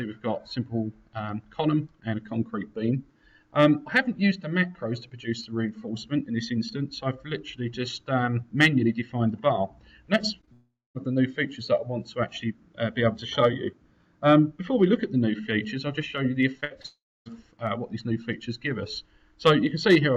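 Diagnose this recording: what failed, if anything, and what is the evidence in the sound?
The network stage lost single packets, and the receiver's short concealed packet loss repair filled each 20 ms hole by extending the preceding sound, then crossfading back. You hear brief smears or wobbles at 10.41–10.45, 10.45–10.49, 16.61–16.64 and 16.82–16.86 s.

A long network dropout is the likely cause of two extended gaps, 10.53–10.97 s (about 420 ms lost) and 16.86–17.28 s (400 ms lost). Concealment stretches the last sound into a decaying buzz or hiss, leaving roughly 230 ms and 290 ms of silence before audio resumes further on.

A burst of packet loss from 16.64 to 16.72 s removed 60 ms in one run, following directly on the single lost packet before it. The decoder held the last sound and attenuated it across the gap, giving a short held buzz or fading hiss before playback picks up beyond the missing stretch.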